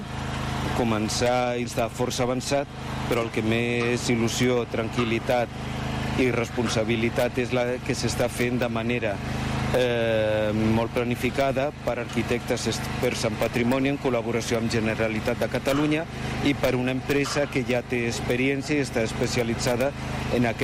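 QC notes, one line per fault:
1.65 s, skip ahead: playback jumps forward with no fill and no audible gap, and the audio on either side of the jump is butted together almost directly. Around a second of material is missing. Later audio was already queued, so the receiver dropped the stretch in between rather than playing it late. This cuts the accumulated delay by roughly the same second. The splice sounds like an abrupt, discontinuous change in the sound.
1.81–2.67 s, jitter buffer speed-up: shortly after the jump, the buffer still held more audio than its target. The receiver trimmed it by repeatedly removing short segments of one or a few pitch periods. Playback runs at about 108% of normal rate over this span with pitch unchanged, and roughly 70 ms is taken out in total. The passage sounds slightly rushed and compressed in time.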